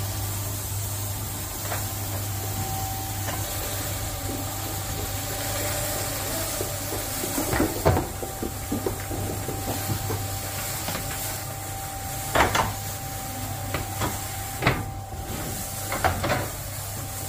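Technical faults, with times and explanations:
No technical faults can be heard; the signal stays continuous across the whole clip.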